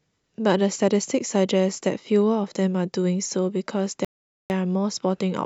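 At 4.05 s the speech drops into a rebuffering stall: the player starves for data, goes silent for about 0.45 s, then picks up exactly where it stopped.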